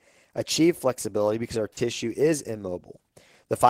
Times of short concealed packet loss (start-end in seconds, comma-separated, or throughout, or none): 1.73-1.78